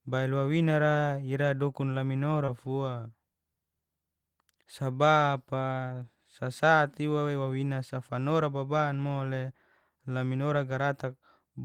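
At about 2.45 to 2.50 s there's a short concealed packet loss. Roughly 20 ms of the call didn't reach the decoder in time, which fits one lost packet. The receiver patched the gap with about 21 ms of made-up audio, stretching out whatever sound came just before, then cross-fading back into the real stream. You hear it as a quick little smear or wobble right at that point, over almost before it registers.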